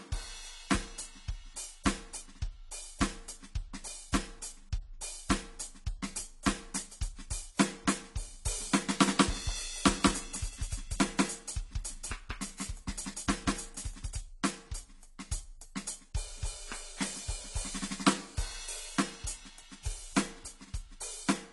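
From the first second to the last, this music has AAC compression damage, and it's plainly audible. Nothing comes through above about 11.5 kHz, so the top end is dull and closed in. Sustained tones have a warbly, smeared texture. That points to AAC-LC at a low rate, something like 32 kbps, where the encoder likely threw away high bands and coarsely quantised the rest to fit the budget.

Then from 9.06 s to 14.20 s you get a doubled audio track. A second full-band copy of the music sits roughly a fifth of a second behind the original at about the same level. It sounds like a hard slapback with no room decay, and it snaps in at 9.06 s and drops out just as abruptly at 14.20 s. The likely cause is the same audio being mixed in twice via a slower second path.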